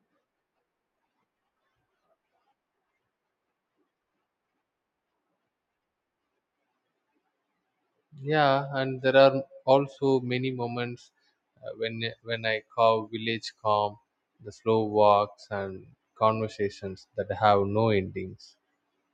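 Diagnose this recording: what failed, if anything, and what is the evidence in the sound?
Nothing in the chain seems to have failed here; the speech comes across steady all the way, with no problem to point at anywhere in the sound.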